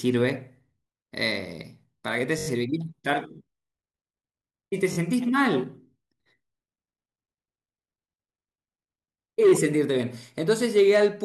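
At 2.39 to 2.48 s, then 4.93 to 4.97 s and 9.49 to 9.52 s, a repeated buffer stutters the speech. Fresh audio arrived late, so one 21 ms piece replayed four, two, then one extra time. Each repeat starts at a hard join. The 21 ms length fits a 1024-sample buffer.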